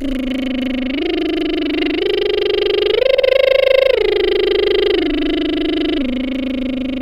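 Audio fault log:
3.16–3.27 s, repeated frames: the music catches and stutters here, with the same 52.2 ms slice played twice more straight after itself, so you hear that little fragment three times in a row. That length fits a pair of compressed frames being written or sent again, and the decoder just dutifully plays them each time. It also pushes everything after it later, adding about 104.5 ms to the clip.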